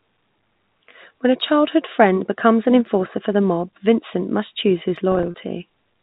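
A speech recording over a G.711 telephone line, band-limited below 4 kHz. From 5.12 to 5.34 s, just after "must choose his", packet loss with pitch repetition leaves brief buzzy, held stretches rather than silent holes. The lost audio totals 100 ms, in runs no longer than 30 ms.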